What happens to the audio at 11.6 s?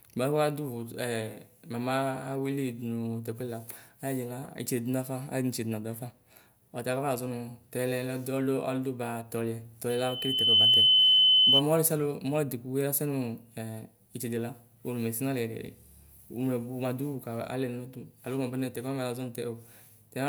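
At 11.62 s a loudspeaker feedback squeal cuts off. From 9.89 s, a single 3 kHz tone swells over roughly 0.7 s to around 10 dB above the speech, as the mic re-amplifies its own loudspeaker. Unlike a steady interfering whistle, it grows from nothing.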